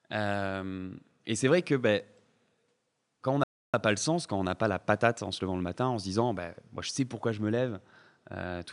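At 3.44 s, just after "quand on", the speech cuts out completely for about 0.3 s (301 ms) and resumes at 3.74 s with "pas le sens quand". This is a playback stall: the output holds silent in mid-phrase rather than fading, likely because the player's buffer ran dry or its output thread was briefly blocked. Because the faint room noise, about 50 dB below the speech, drops out along with the speech, the gap sounds like a dead hole.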